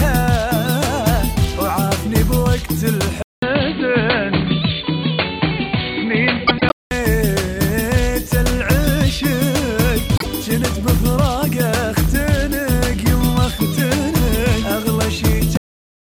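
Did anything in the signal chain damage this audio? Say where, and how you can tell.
Yes. From 3.22 s to 6.91 s the sound turns dull, with nothing above 4.5 kHz and a faint new noise floor, after a 200 ms silence at the switch. The likely cause is the input switched to a poorer device. Level stays unchanged, so it isn't a gain fault.

Frames out of order appear at 6.47 to 6.72 s, where two adjacent 104.5 ms blocks play swapped, and at 10.16 to 10.26 s with 26.1 ms blocks. Each gives a garbled flutter, a network or storage ordering fault. No time is missing, unlike a dropout.

A cut-off end at 15.57 s stops the audio mid-sound, dropping straight to digital silence with no decay. The final playback or write buffers were lost. A fade or natural ending would taper away, and this does not.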